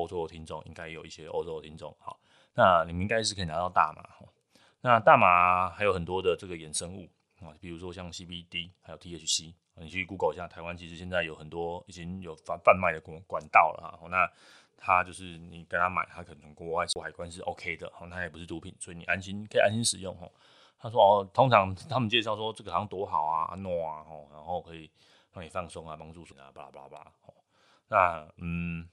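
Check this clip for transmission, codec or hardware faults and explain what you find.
One fault is present, a CD skip, at 16.93 to 16.96 s in this speech clip. The sound drops out for about 30 ms, then resumes at a different point, so the speech jumps abruptly instead of running on. A knock or a flaw on the disc made the laser lose its track and land on another turn of the spiral. The player muted briefly while it relocked, then carried on playing from that new position.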